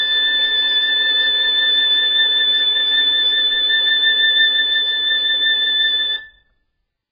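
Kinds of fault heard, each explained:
AAC compression: The music sounds dull and smeared throughout, with nothing above 5 kHz. This heavy damage likely comes from very low-bitrate AAC-LC coding.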